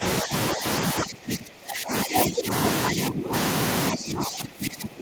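An echo canceller, likely unable to separate this talker from loudspeaker echo during both-sides speech, turned everything down: speech suppressed in double talk at 0–0.04, 0.22–0.33, 0.53–0.65, 0.94–2.5, 2.93–3.33 and 3.92 s onward. The speech dips by roughly 10 to 20 dB, deepest in the longer stretches.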